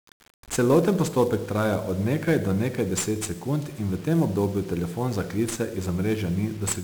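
1-bit DFPWM compression runs through the whole speech clip: each sample keeps a single bit that nudges an adaptive level up or down, so heavy broadband quantisation noise makes everything fuzzy and crackly, with treble sunk in hiss, consistent with a 48 kbps stream.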